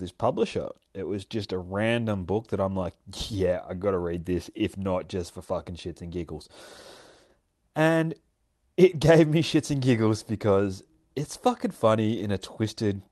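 No technical faults can be heard in this speech: it has passed through a call path that behaves as expected, with a bandwidth limited to about 12 kHz that fits an Opus connection at a moderate bitrate.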